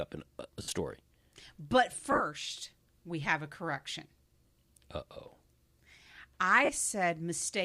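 At 0.62 s (60 ms), 2.12 s (60 ms scattered over 80 ms, runs up to about 30 ms), 4.46 s and 6.65 s (40 ms each), the speech smears into brief noisy hiss. These are lost LE Audio frames, which the decoder concealed with sign-scrambled repeats of the previous spectrum. Unlike a plain dropout, the gaps are filled rather than silent.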